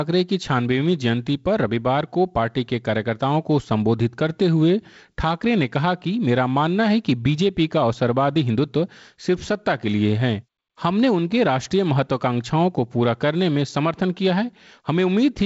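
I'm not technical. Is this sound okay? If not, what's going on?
Yes, nothing here is faulty: the speech has passed through G.722 wideband telephone coding, so it carries a little of that format's light upper hiss and stops at about 7.7 kHz, which is normal for a wideband phone call.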